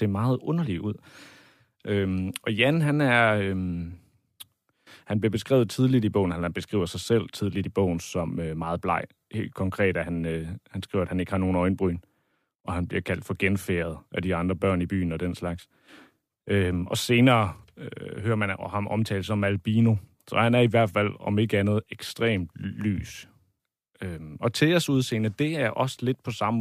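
No technical faults can be heard anywhere in this recording.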